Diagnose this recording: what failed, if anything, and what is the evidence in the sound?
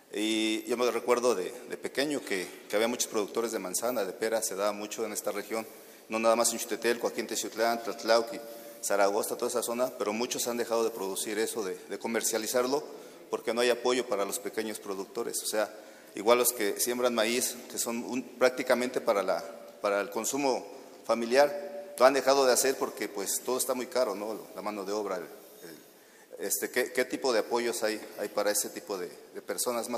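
Nothing failed: no stage from wiring and conversion through processing, transport and playback leaves any audible fault in the recording.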